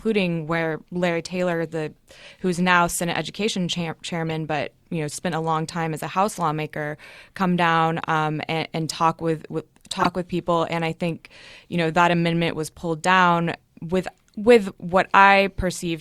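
At 4.30 s, before "but you know spent", a corrupt frame decoded gives a faint blip. Damaged data misplaced energy. At 10.00–10.06 s, after "and talk with with", a louder burst follows.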